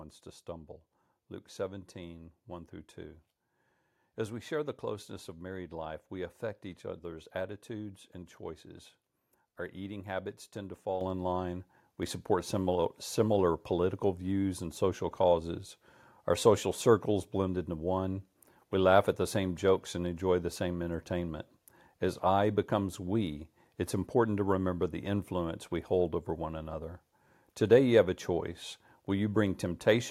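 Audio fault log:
11.01 s, microphone volume stepped up: the whole sound picture jumps louder at once by about 7 dB, with the speech and the room background rising together rather than the talker simply speaking up. That joint rise is the giveaway: the call software judged the microphone input too quiet and raised the device's input volume in a single step instead of ramping it, so the change lands abruptly and everything after it stays at the higher level.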